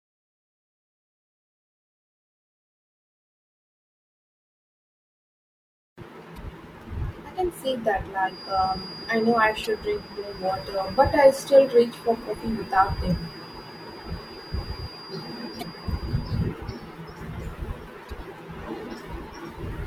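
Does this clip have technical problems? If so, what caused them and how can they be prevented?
Yes. Two kinds of fault are audible.

Damaged data in a compressed stream shows up as five brief glitches, at 6.34–6.38, 9.64–9.67, 13.08–13.12, 15.59–15.63 and 18.07–18.11 s. Each lasts about 40 ms. At those points the decoder hit corrupted frames, lost its place, and resynchronised on the next valid header, so the audio briefly garbles. On a spectrogram each one is a narrow vertical smear of broadband energy, and the waveform shows an abrupt step. Checksummed transport and error-checked storage or transfer would prevent it.

A feedback whistle starts just after "can see that" at 8.21 s and continues to 16.55 s. It is a thin, steady tone at 4.8 kHz, roughly 20 dB below the speech, and its level swells and fades slowly. The likely cause is a loudspeaker-to-microphone loop held just below the point of runaway, so one resonant frequency keeps ringing. 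On a spectrogram it appears as a single horizontal line at 4.8 kHz across those eight seconds, and the waveform shows a faint fine ripple riding on the speech. Lowering monitor gain, moving the microphone away from the speaker, or notching that frequency would prevent it.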